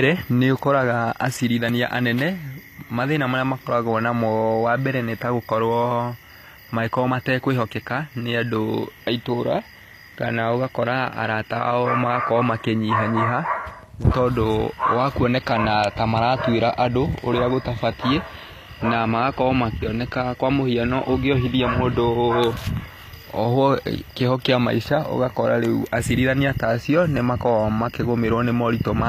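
From start to finish the speech carries plainly audible HE-AAC compression, likely at a low bitrate around 24 kbps. The rebuilt treble makes s sounds gritty and metallic.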